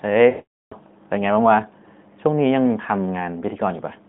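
From 0.30 to 0.74 s, lost AMR speech frames leave a 420 ms hole, which fits about 21 dropped 20 ms frames. The last good sound stretches into a fading buzz, then silence, and speech returns weak. The waveform decays to a flat line; the spectrogram shows frozen, smeared harmonics, then a blank gap.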